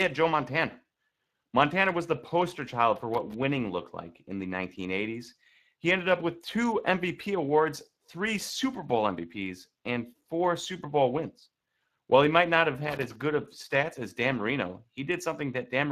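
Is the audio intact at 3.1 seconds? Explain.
No. From 2.96 to 3.34 s the audio breaks into an irregular burst of crackle and scratching, the sound of loose connector crackle. A worn or dirty contact in the signal path is rapidly making and breaking as it shifts, chopping the signal into fragments. Any DC sitting on the line turns each break into a small pop, which gives the burst its rough, uneven texture.

Beneath that burst, and through the whole clip, the speech carries plainly audible Speex codec damage. It sounds grainy and hoarse, and nothing is present above 15.3 kHz. Speex is a CELP codec: it models the voice with a short-term filter and spends a limited bit budget on the excitation signal that drives it. With too few bits for that excitation, the rebuilt speech loses smoothness and picks up a noisy roughness. The degree of damage fits a mid-range setting of around 22 kbps.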